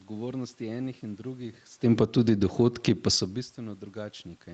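A short speech recording over a call path, with nothing above 8 kHz. Automatic gain falling starts at 1.77 s and runs to 3.10 s. Just after the talker moves around 1.5 s, the gain control judges the input too loud. It pulls the level down by about 5 dB, so voice and room noise sink together. Automatic gain rising overlaps it, from 2.23 s to 3.87 s. The input drops by about 24 dB, probably as the talker moves back. The control then lifts gain by about 7 dB, and the background swells along with the voice.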